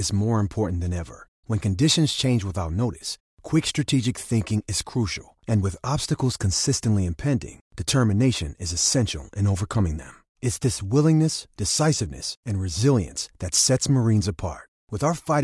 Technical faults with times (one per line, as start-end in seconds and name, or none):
none